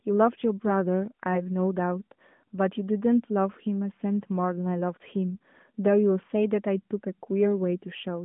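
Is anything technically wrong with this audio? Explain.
No, nothing here is technically wrong; it's just speech coming through the narrow band of an ordinary mobile phone call, topping out a little under 4 kHz.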